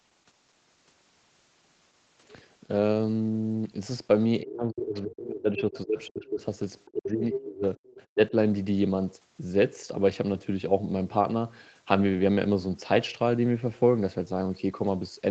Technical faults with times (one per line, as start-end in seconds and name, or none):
4.43-6.41 speech suppressed in double talk
5.57-5.80 other side's voice leaking through
6.86-7.77 speech suppressed in double talk
7.33-7.44 other side's voice leaking through
7.90-8.03 other side's voice leaking through
8.15-8.35 speech suppressed in double talk